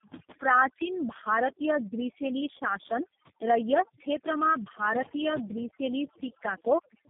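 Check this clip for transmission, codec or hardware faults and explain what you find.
Two faults run through the whole clip: overdone noise removal and tandem speech coding.

The overdone noise removal lasts from start to finish. An aggressive noise suppressor has pushed any frequency band close to its noise estimate down to almost nothing, and softer parts of the speech went with it. Between phrases the background falls to near silence dotted with brief twinkling specks. On a spectrogram the gaps look blank, with isolated scattered dots, and the speech harmonics have ragged, eaten-away edges.

The tandem speech coding is also present throughout. The audio passed through a chain of G.729A at 8 kbit/s, G.723.1 at 6.3 kbit/s and G.729A again, with G.711 A-law links in between. That makes three low-rate speech coders in a row, each re-encoding the previous one's degraded output. The speech sounds rough, muffled and warbly. 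A spectrogram shows nothing above about 3.7 kHz and smeared, unsteady formants. The waveform looks coarse rather than smoothly periodic.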